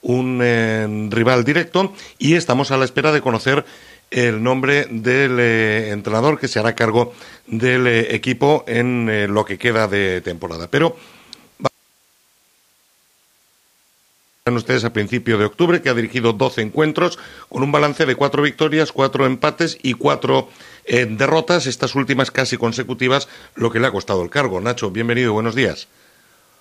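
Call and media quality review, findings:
Audio dropout to a faint residue, 11.67–14.47 s (about 2.8 s). Likely cause: signal feed lost upstream while the downstream path stayed live. Sound cuts out abruptly mid-flow; the gap holds only hiss, roughly 40 dB below normal level, then the signal returns just as suddenly, with no fade either side.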